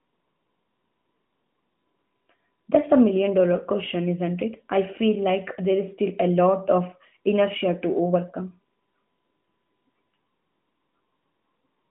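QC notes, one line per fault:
No faults heard in this speech recording.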